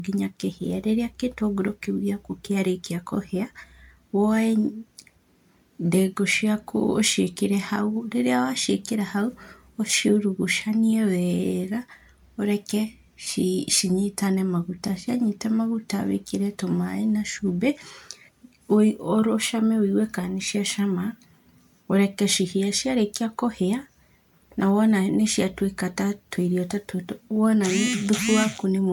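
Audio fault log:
throughout, generation loss: the speech has a swirly, hollow, smeared quality that sounds worse than a single 128 kbit/s MP3 pass, with content extending up to about 20.1 kHz. It's likely been decoded and re-encoded around seven times. Each pass re-quantises on a shifted frame grid, so the noise and spectral holes stack up and consonant attacks come out blurred.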